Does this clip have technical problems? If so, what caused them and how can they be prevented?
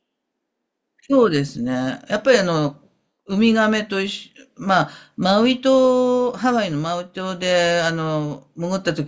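No, there are no technical problems in this speech clip. Since nothing went wrong, there is nothing here that needs preventing.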